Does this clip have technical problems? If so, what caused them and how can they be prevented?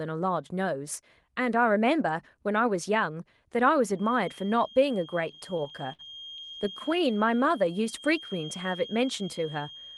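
Yes. A feedback whistle, a steady 3.2 kHz tone roughly 20 dB below the speech, runs from 3.92 s to the end, swelling and fading slowly in level. It is likely caused by loudspeaker output reaching the microphone with loop gain near unity. Reducing monitor level, using headphones, or adding echo cancellation prevents it.

Repeated stalls (stutter) occur between 5.31 s and 6.82 s: frequent brief hangs, the longest about 64 ms, where the receiver stretched the last sound while waiting for late packets. About 15% of that span is concealed but nothing is lost. A deeper jitter buffer or steadier network prevents it.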